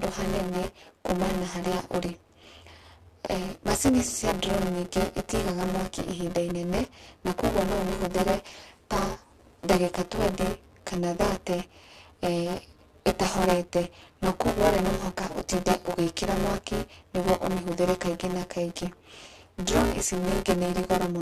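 Buffer tearing throughout: each period splices in roughly a third of audio about 10 ms stale, giving a 172 Hz rattle that fits a 256-sample buffer, seen as evenly spaced vertical spectrogram lines.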